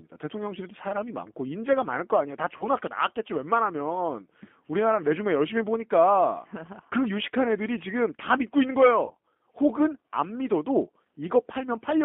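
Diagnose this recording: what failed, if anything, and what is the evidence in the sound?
The codec stage is the root of the constant damage: the speech has been through the G.729 codec, most likely the G.729A variant, and the sound fits its 8 kbit/s budget. The line is confined to roughly 200 Hz to 3.4 kHz, so the low body and all upper air are gone. Because the decoder rebuilds each frame from a vocal tract filter, a pitch predictor and a handful of pulses, the speech has a plainly audible rough, synthetic graininess.

At the network stage, VoIP packet loss was concealed by the speech codec at 2.57 to 2.68 s and again at 9.06 to 9.13 s. Each gap fits a single lost 30 ms packet. With nothing to decode, the receiver stretched its last pitch and filter state and turned the gain down frame by frame, producing a brief smeared stretch that fades. Since every frame depends on the previous one, the distortion outlasts the missing 30 ms before the speech recovers.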